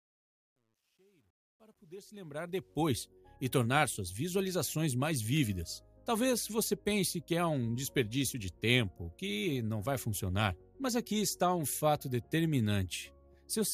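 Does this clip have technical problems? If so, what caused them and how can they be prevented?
Yes. Truncation distortion on the fade-in runs from 0 to 2.86 s and is worst until 2.06 s. The quiet start turns gritty, which fits an undithered 11-bit gain stage. Unlike gate chatter, the grit eases gradually as the level rises. Dither fades and process them at 24-bit or floating point.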